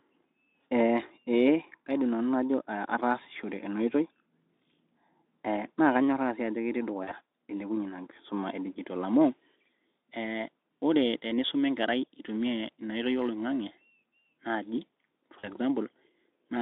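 A speech recording carried over a Speex VoIP link, band-limited to roughly 300 Hz to 3.7 kHz, shows VoIP packet loss concealed by the speech codec at 7.03 to 7.12 s and 15.39 to 15.49 s. Each time, about 40 ms of audio goes missing, which fits two dropped 20 ms frames. The decoder fills the gap by repeating its last pitch and filter at falling gain, so the sound smears into a brief buzzy tone or coloured noise that fades, and stays weakened for a short while after packets resume.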